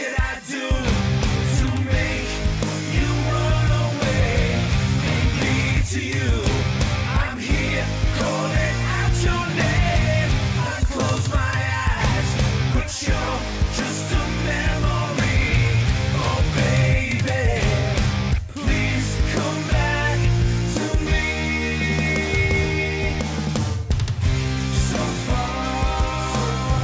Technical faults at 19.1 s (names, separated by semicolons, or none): none